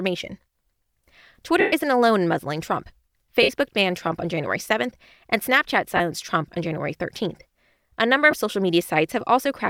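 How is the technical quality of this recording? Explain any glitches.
The recording is marred by four brief Bluetooth dropouts.

Lost LE Audio frames occur at 1.60–1.73 s, 3.42–3.49 s, 5.97–6.00 s and 8.31–8.33 s. When frames go missing, the LC3 decoder repeats the last spectrum with randomised phase, so the speech smears into a short noisy hiss. The longest gap, 120 ms, fades toward silence. The gap lengths fit 7.5 ms frames.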